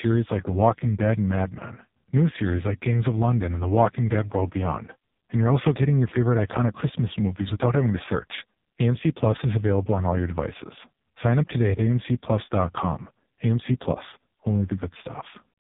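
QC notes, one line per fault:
Throughout, AMR narrowband mobile codec. Nothing above 3.8 kHz survives, so the speech sits in a narrow phone band. The heavy buzzy, synthetic quality comes from a vocal tract model rebuilding speech from few pulses, which fits a low AMR-NB mode around 5 kbps.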